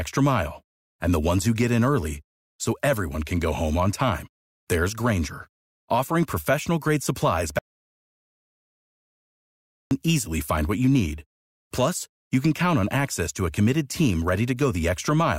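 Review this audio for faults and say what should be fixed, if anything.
Right after "offering professional grade supplies", the speech cuts to dead silence from 7.59 to 9.91 s, returning at "easily find what you": an audio dropout to silence, likely a lost input written as silence. Secure input connections and monitor live input levels so a dropped link is caught during recording.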